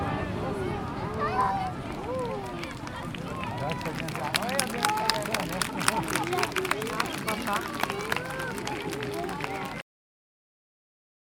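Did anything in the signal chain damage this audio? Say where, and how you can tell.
Yes. The recording shows a cut-off end, introduced at the storage or final-buffer stage. At 9.81 s the sound stops abruptly, mid-event, and the remaining 1.6 s or so is flat digital silence with no decay or room tail. On a waveform the trace snaps from active amplitude straight to a flat line. A spectrogram shows energy ending on a hard vertical edge across all frequencies. The closing buffers were never written out, so the material was simply truncated.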